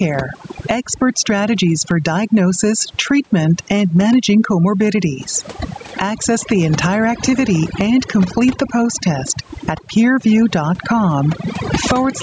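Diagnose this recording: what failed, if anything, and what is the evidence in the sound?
Overdone noise removal runs through the whole clip, in the call processing stage. Between phrases the background falls to near silence with twinkling specks. The suppressor cuts frequency bands sitting near its noise estimate, taking quiet speech detail with them.

Gain pumping is also present throughout. The gain is pulled down under each loud syllable, swinging by around 20 dB. Loud and soft passages sit squashed together in level. The likely cause is input gain set far too high, with a fast limiter pulling it down on every peak.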